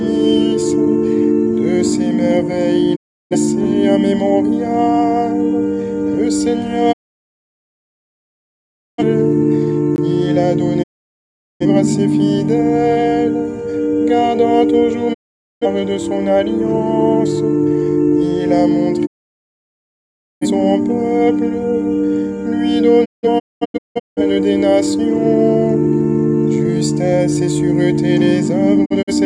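Digital broadcast dropout at 2.95 to 3.36 s and again at 6.91 to 9.03 s. The receiver stopped getting valid frames and muted, so the sound fades to silence over about 20 ms. It comes back only when clean frames resume, with the missing stretch gone rather than delayed. The held-back lengths, roughly 0.34 s and 2.05 s, are multiples of about 43 ms, which fits fixed-size broadcast frames being discarded whole.

Gap between chunks at 9.96 s, a 20 ms hole. It falls at the join between 10-second chunks, leaving inserted silence between them. Nothing is lost. The sound simply stalls briefly at the boundary and picks up where it left off.

The dropouts continue at 10.82 to 11.66 s, 15.13 to 15.65 s and 19.05 to 20.46 s, each a short fade into a clean mute lasting about 0.5 to 1.4 s. From 23.04 to 24.22 s the muting breaks into several short holes, the longest about 0.21 s, as frames alternately fail and pass. 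A last cluster of tiny holes, none longer than about 43 ms, falls at 28.84 to 29.13 s.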